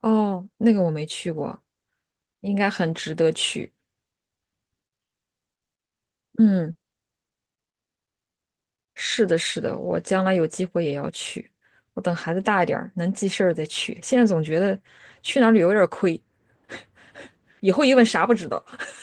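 Short concealed packet loss at 6.71 to 6.77 s and 7.29 to 7.33 s leaves brief smears in the speech, where the receiver extended the preceding sound over 40 ms and 20 ms gaps before blending back. A burst of packet loss at 6.87 to 6.95 s drops about 60 ms, bridged by a fading continuation of the last sound. At 7.71 to 7.83 s a second burst drops about 100 ms, and the concealment fades away to silence before the speech resumes further along. The sound carries a call codec's coding texture and tops out around 12 kHz, which points to Opus in a WebRTC call path.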